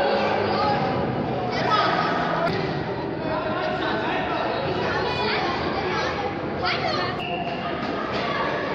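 No technical faults are audible.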